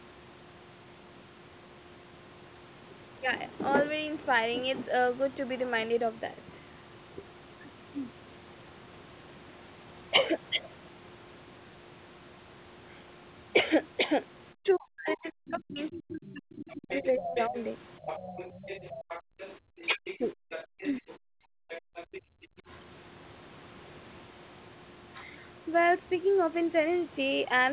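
A speech recording from a call, band-limited to nothing above 4 kHz, which fits a narrowband telephone codec. Speech suppressed in double talk appears from 14.6 to 17.56 s and from 19.95 to 21.56 s. The talker's voice dips by roughly 40 dB in pieces, for around two seconds in total in the first stretch and a fraction of a second in the second. The likely cause is an echo canceller that could not separate the talker from loudspeaker echo, so it turned both down. The other side's voice leaking through runs from 15.09 to 22.21 s. It sits around 15 dB below the main speech, as a second voice. It is likely the remains of the far end played on the loudspeaker and not fully removed. Background gated by the echo canceller occurs at 18.94–19.67 s, 20.64–20.71 s and 21.84–22.63 s. The room sound drops by about 40 dB while the loudspeaker plays, then returns when the canceller releases.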